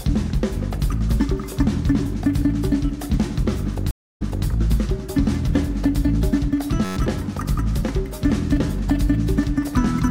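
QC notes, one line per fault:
3.91–4.47 s, stream reconnect: the connection dropped, leaving 0.30 s of silence, then a fresh decoder resumed 0.26 s earlier from a resent burst, fading in.
6.85–6.97 s, system hang loop: the system froze while the hardware replayed one 10.67 ms slice 11 times, a 93.8 Hz buzz fitting a 512-sample buffer; roughly 0.1 s lost.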